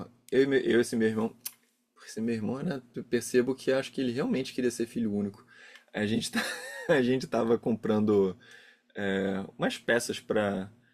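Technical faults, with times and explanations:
No technical faults are heard in this speech clip.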